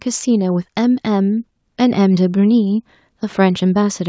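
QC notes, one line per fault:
No faults found in the speech. It went through call microphone processing, so the lowest bass is trimmed away and nothing is heard above 8 kHz.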